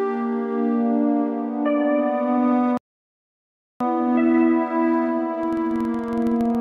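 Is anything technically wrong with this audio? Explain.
Yes, the music has two faults.

A rebuffering stall at 2.77 s cuts to silence for 1.03 s after the player runs dry, then resumes exactly where it stopped, adding time without losing anything.

A filter restarted on every block, from 5.39 s to the end, starts each block from zero, leaving a level-following 21.5 Hz buzz of ticks that fits a 2048-sample block.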